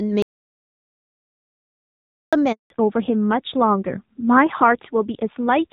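Audio dropout to silence, 0.22 to 2.33 s: the speech cuts off abruptly and about 2.1 s of silence follows, with no room tone at all. The likely cause is a lost input while the recorder kept writing silence, so that stretch of speech is simply gone.

Handover gap, 2.52 to 2.70 s: after a brief return of sound, the voice fades out within a few tens of milliseconds and stays silent for 180 ms. This is the call switching networks, with no speech frames delivered until the new link came up.

Fallback to narrowband, from 2.70 s to the end: the earlier wideband sound, clean and extending up to about 7 kHz, gives way to audio with nothing above 4 kHz. The voice turns duller and rougher, which fits a drop from the HD Voice codec to a low-rate narrowband one, around 7.4 kbit/s.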